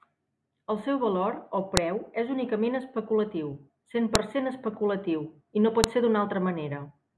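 At 1.77, 4.15 and 5.84 seconds there's a sharp, loud snap that ignores whatever the speech is doing. That's a file header played as audio: the pieces were joined with their WAV headers left in, so those few bytes come out as a burst of raw samples.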